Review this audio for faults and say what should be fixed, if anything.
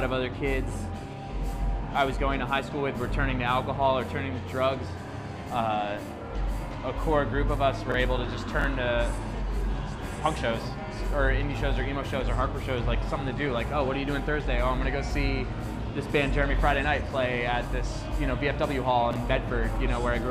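Three brief jumbled stutters occur at 7.90–7.94 s, 8.59–8.64 s and 19.11–19.16 s. Each is a case of chunks out of order: a block of about 23 ms plays one position late, swapping with its neighbour and leaving hard joins. Fix this by sequencing buffers strictly by index or timestamp before writing them out, so a late block waits for its slot.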